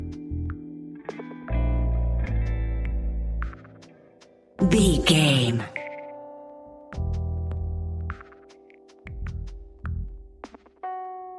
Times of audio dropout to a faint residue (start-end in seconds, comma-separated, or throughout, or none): none